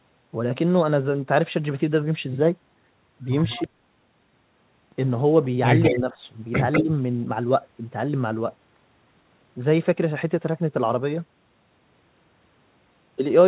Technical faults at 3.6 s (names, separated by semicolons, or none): echo leak